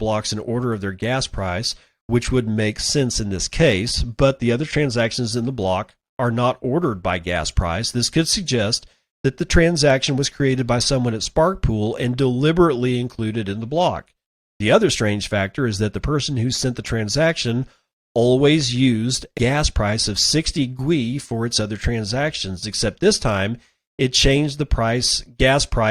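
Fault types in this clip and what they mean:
Damaged data in a compressed stream: a stretch of the encoded speech arrived corrupted, so the decoder could not read those frames correctly, lost its place in the stream and had to hunt for the next valid frame header before resuming. In the sound this leaves a very short glitch at 19.37 s, falling between "the transaction always used" and "price of", after which the speech carries on.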